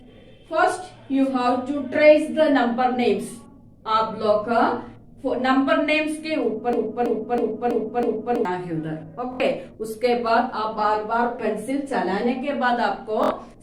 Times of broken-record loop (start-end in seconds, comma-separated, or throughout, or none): 6.73-8.45